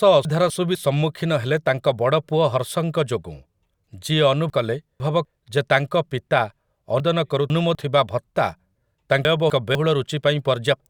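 Chunks out of order at 0.25–0.75, 4.5–5.25, 7.0–7.75 and 9.25–9.75 s: a 250 ms chunk plays one or two chunks late, jumbling speech, but unlike a dropout, nothing is missing.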